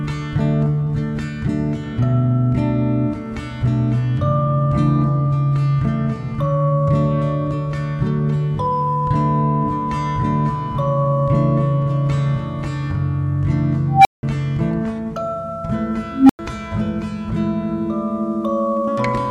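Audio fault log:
13.89–14.23 s and 16.13–16.39 s, unstable filter: A recursive filter runs away with itself twice. Each of its feedback loops amplifies rather than decays. A tone near 700 Hz swells over about 0.16 s, clips harshly, then drops to silence for about 0.18 s. At 16.13 s a lower tone, near 300 Hz, builds over about 0.17 s and cuts out for about 0.1 s. The silences come from numeric overflow, lasting until the filter resets.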